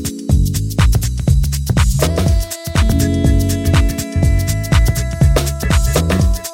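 No technical faults can be heard anywhere in the audio.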